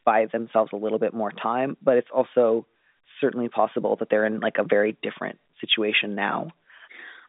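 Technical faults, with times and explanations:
No technical faults are audible in this telephone speech.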